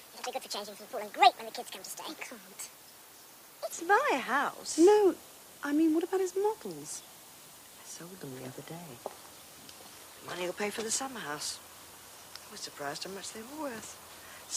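From the start to 3.73 s, the opening section plays at the wrong speed, running at 1.5 times its proper rate. Because speed and pitch move together here, everything in that stretch sounds hurried and is raised by roughly seven semitones, then snaps back to normal tempo and pitch at 3.73 s. The likely cause is that this segment was clocked or resampled at the wrong rate during editing or playback.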